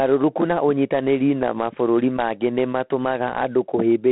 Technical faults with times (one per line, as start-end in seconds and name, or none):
0.00-4.11 G.726 ADPCM